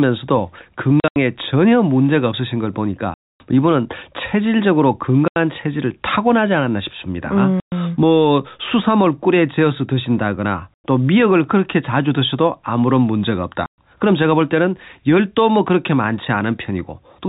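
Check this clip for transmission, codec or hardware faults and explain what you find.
The speech, carried over a G.711 telephone path with nothing above 4 kHz, is repeatedly cut by abrupt silent gaps. The fault is packet loss filled with silence.

The sound drops into dead holes at 1.0 to 1.16 s (120 ms lost in scattered runs, the longest 80 ms), 3.14 to 3.4 s (260 ms), 5.28 to 5.36 s, 7.6 to 7.72 s, 10.74 to 10.84 s and 13.66 to 13.78 s. Packets went missing and the receiver played plain silence in their place, so the audio stops and restarts with hard edges. The gap lengths step in 20 ms units, which fits 20 ms packets.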